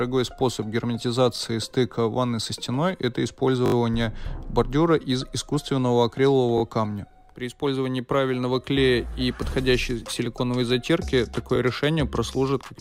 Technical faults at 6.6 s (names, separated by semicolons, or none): repeated buffer